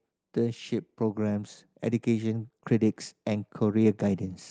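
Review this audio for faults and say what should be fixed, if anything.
Automatic gain rising from 0.33 to 4.29 s: the gain control judged the input too quiet and raised it by about 6 dB, so speech and background swell together. Fix the input level or slow the gain control's release to prevent it.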